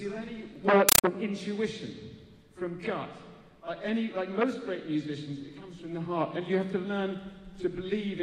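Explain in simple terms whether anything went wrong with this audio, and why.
From 0.89 to 1.04 s, a Dolby Digital (AC-3) stream was handed on as ordinary sound instead of being decoded, which is a compressed stream played as audio. Its coded data comes out as 8 ms noise bursts, 31 per second, heard as chattering static replacing the sound.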